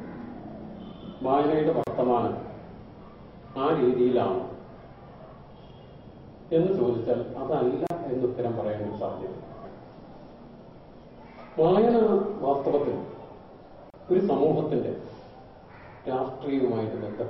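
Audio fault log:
1.84, 7.87 and 13.90 s: gap at a join of encoded pieces. Untrimmed encoder delay and padding at joins open 33 to 34 ms silences every 6 s, then sound resumes.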